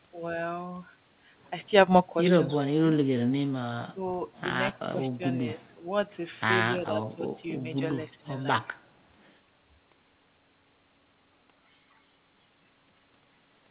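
From 2.65 to 2.85 s the sound dips sharply, by about 25 dB, then sags again at 3.92 to 4.01 s (about 10 dB), 4.73 to 5.24 s and 5.55 to 5.86 s (about 15 dB each), 6.76 to 7.25 s (about 15 dB) and 8.18 to 8.28 s (about 20 dB). These are brief holes and thinned stretches rather than clean silences. The likely cause is speech suppressed in double talk: with both ends active, the echo canceller mistook this talker for loudspeaker return and turned everything down.

Inside the 6.76 s dip, at 6.79 to 6.83 s, a faint, short scrap of delayed sound appears, roughly 30 dB below the main level and trailing it by 257 ms. It is likely an echo leak, where the far end's loudspeaker audio reached its microphone and its echo canceller let a fragment of that pickup slip back down the line.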